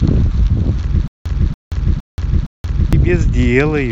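Speech, with a stutter with silent gaps from 1.08 to 2.93 s: a 284 ms fragment plays four times, each followed by about 178 ms of dead digital silence, so the burst returns every 462 ms. A stalled player or stream is the likely cause, replaying its last chunk on each retry while the audio that should have played is lost. Plain dropouts leave random holes without repeating anything. Here the same fragment comes back at a steady pace.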